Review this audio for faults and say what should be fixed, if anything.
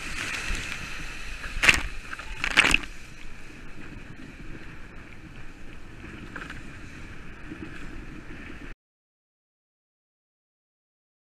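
At 8.73 s the audio drops out to silence and stays there to the end, about 2.65 s of silence with no room tone. This is an audio dropout to silence, likely from the input being lost while recording continued. Re-record or replace that tail. Secure connections and monitor input levels throughout capture to prevent this.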